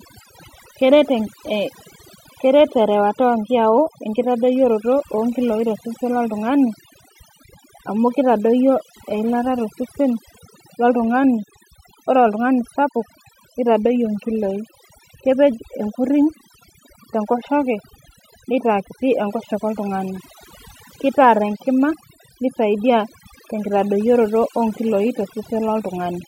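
From start to finish the speech has overdone noise removal: a denoiser pushed too hard is knocking out any frequency band that sits near its noise estimate, so the background drops and breaks up into twinkly specks, and the voice's quieter detail goes too.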